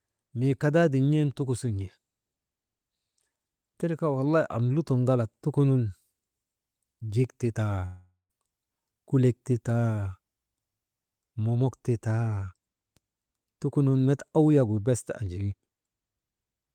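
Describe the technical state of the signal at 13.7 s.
Nothing is wrong with the signal at 13.7 s; the speech passes through intact at that point, with no dropout, clipping or other fault to be heard.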